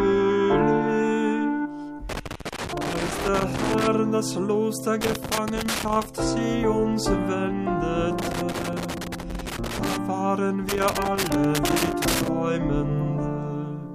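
Loose connector crackle bursts in at 2.09 to 3.87 s, 5.01 to 6.06 s, 8.19 to 9.97 s and 10.69 to 12.28 s: a worn contact intermittently breaking the signal, heard as irregular scratchy crackle.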